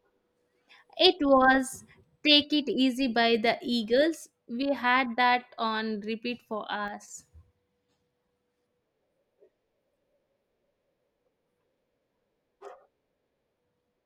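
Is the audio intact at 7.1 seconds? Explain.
No. The moment falls at the tail of a sudden gain jump running from 6.88 to 7.08 s. The speech and its background noise drop together by about 6 dB in a single step, likely because a gain change was applied between adjacent samples with no ramp. On a waveform the envelope visibly halves at 6.88 s and steps back up near 7.08 s. A spectrogram shows the whole band dimming in a hard-edged vertical block, noise floor included.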